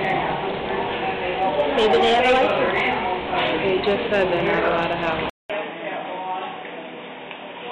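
Input switched to a poorer device at 5.30 s, running to the end: after a 200 ms silence, the sound turns dull, with nothing above 3.8 kHz, drops roughly 5 dB in level, and gains a new noise floor about 40 dB down, likely from the recording moving to a narrower-band microphone.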